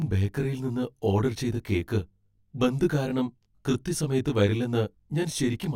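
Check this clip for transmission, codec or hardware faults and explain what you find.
One fault runs through the whole speech clip: channel delay (comb filtering). One channel lags the other by roughly 20 ms, and summing them to mono cancels shared content at evenly spaced frequencies, starting near 30 Hz. The result is a rough, slightly doubled sound. Because the notches stay fixed, it differs from a flanger's sweep, and the delay is too short to be heard as a distinct echo.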